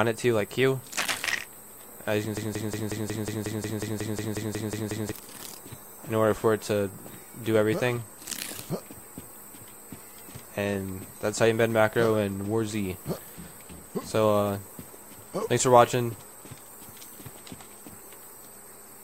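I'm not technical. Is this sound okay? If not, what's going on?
No. From 2.37 to 5.12 seconds, a tiny scrap of sound, 0.18 seconds long, repeats 15 times back to back, like a stuck record. This broken-record loop likely comes from the player or stream stalling on its last piece, and the sound meant for that stretch is lost.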